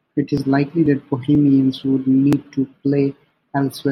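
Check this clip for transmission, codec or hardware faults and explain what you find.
There is one fault: audio missing between chunks, at 0.37, 0.86, 1.35, 1.84, 2.33, 2.81 and 3.30 s. The first falls just before "likely that" and the third just after it. Each skip removes about 10 ms, and the two sides are spliced together with no gap. The gaps repeat every 0.49 s, likely because the audio is processed in half-second chunks and a sliver is lost at each handover. Packet-loss dropouts would be irregular and leave silence or smeared fill. These skips are evenly spaced and butt-joined.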